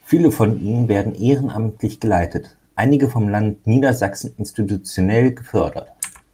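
No technical faults can be heard anywhere in the recording of speech, with the signal holding steady and intact from its opening moment to its final one.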